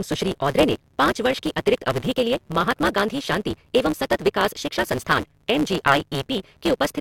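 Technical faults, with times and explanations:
Throughout, block size mismatch (truncated): speech runs 1.6 times fast at normal pitch, with a 138 Hz buzz. Each block's tail is dropped, consistent with 512-sample writes.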